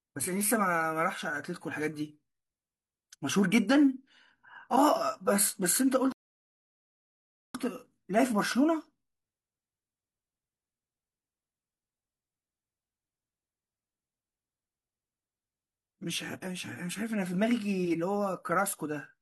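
A speech clip with one rebuffering stall from 6.12 to 7.55 s: playback starved, went silent, then picked up exactly where it stopped, adding about 1.4 s.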